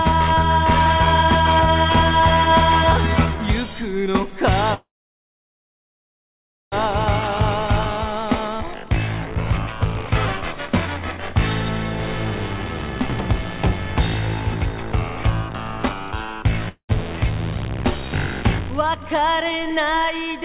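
From 4.74 to 6.74 s there is a call audio freeze, likely from delayed packets. The last sound decays into a near-flat waveform for about 1.9 s, then resumes where it stopped.

From 8.06 to 10.53 s, a jitter buffer speed-up plays the audio about 3% fast at unchanged pitch, trimming roughly a tenth of a second. The spectrogram's harmonics stay level while events crowd slightly closer.

A second speed-up, from 15.49 to 16.04 s, is stronger at 112%, removing roughly 70 ms, so that stretch sounds audibly hurried.

At 16.69 to 16.91 s a long network dropout, likely lost packets, fades into about 0.1 s of silence. The audio returns missing about 0.68 s, shown as a short blank column and an abrupt restart. Throughout, the spectrogram stays empty above 4 kHz, as expected from the narrowband call codec.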